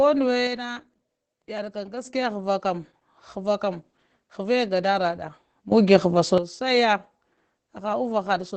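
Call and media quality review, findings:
Opus voice compression, whole clip: SILK-mode coding at a low rate, consistent with roughly 12 kbps wideband. Coarse excitation coding leaves the speech muffled, slightly hoarse and robotic; band empty above about 8.6 kHz, plainly audible damage.

Sudden gain jump, 0.47–2.05 s and 5.72–6.38 s: likely a digital gain step applied without a ramp. Speech and background noise drop about 6 dB at the first, jump up about 12 dB at the second, level changing abruptly at each edge.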